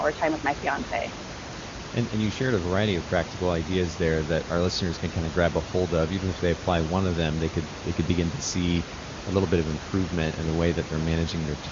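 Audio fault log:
No faults logged; room noise sits about 10 dB below the speech, and nothing is heard above roughly 7.3 kHz, consistent with AMR-WB wideband voice coding at a high rate.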